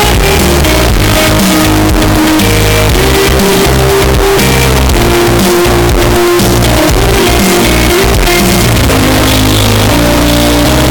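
From start to finish the audio is a float read as integer. The likely cause is 32-bit float samples read as 32-bit integers. The waveform turns nearly square, very loud and harsh.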